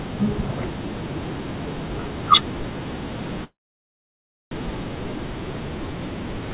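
At 3.44 s the speech stops in a call audio freeze, likely from packets stalling in transit until the jitter buffer emptied. A short fading fill gives way to about 1 s of silence, and at 4.53 s the speech resumes where it stopped, 1.07 s late, with nothing lost and still band-limited to 4 kHz.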